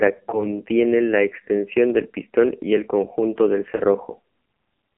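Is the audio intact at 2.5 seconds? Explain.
No. The AMR narrowband mobile codec affects the whole clip, including 2.5 s. Low-bit-rate vocal-tract modelling makes the speech buzzy and synthetic, consistent with the 5.9 kbps mode. On a spectrogram, energy is confined to roughly 200 Hz to 3.4 kHz, with nothing above that cut-off.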